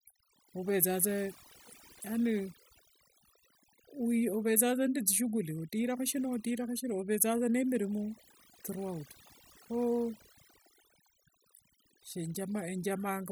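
Throughout the speech, overdone noise removal is at work: a heavy noise reducer cuts narrow frequency bands whenever they sit near its noise estimate. Pauses fall to near silence with twinkling specks, and a spectrogram shows scattered isolated blips between patchy, hollowed-out harmonics.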